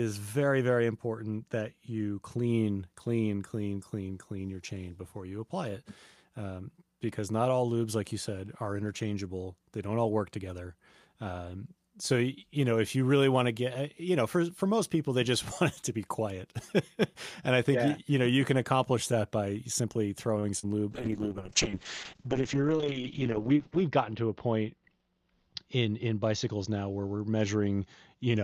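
At 20.39 to 20.45 s, just after "accomplish that by simply", there is a short stall from a late packet. The packet arrived late and the jitter buffer ran dry. The receiver held the last sound for about 38 ms, then resumed without losing anything. It is heard as a slightly stretched sound with a faint buzz or dip.

At 20.59 to 20.65 s comes a short concealed packet loss. About 40 ms of audio never reached the decoder. The receiver filled the gap by extending the preceding sound and then blending back into the real signal. The result is a brief smear or wobble.

From 20.92 s to the end, there is a call bitrate drop. The bandwidth estimate fell, and the encoder switched to far fewer bits, which fits a drop from about 48 kbps to about 7 kbps. The audio bandwidth narrows from 20 kHz to 8 kHz. The speech turns muffled, rough or watery. The coarsest stretch lasts about 2.9 s.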